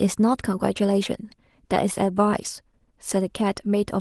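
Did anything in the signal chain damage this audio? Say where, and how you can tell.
No, nothing in the chain audibly damaged this speech.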